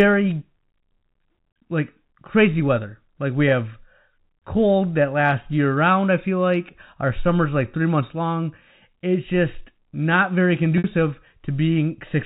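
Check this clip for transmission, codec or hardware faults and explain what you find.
One transmission fault is audible: packet loss with pitch repetition, from 10.78 to 10.84 s. About 60 ms of audio never arrived, which fits three lost 20 ms packets. To bridge the gap, the receiver kept replaying the last pitch period it had and faded that copy out. The speech briefly freezes into a held, buzzy tone that dies away before the real signal resumes through a short cross-fade. The clip is carried over G.711 telephone coding, whose 4 kHz ceiling bounds the bandwidth throughout.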